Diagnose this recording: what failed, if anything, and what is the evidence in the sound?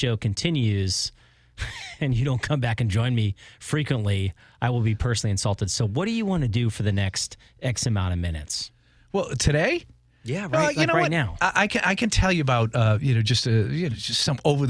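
Nothing failed here, and the sound of this speech recording gives no evidence of a fault at any stage.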